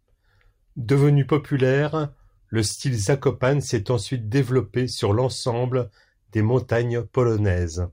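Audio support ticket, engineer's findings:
No faults found in recording.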